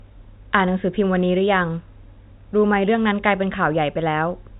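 No technical faults can be heard in this speech.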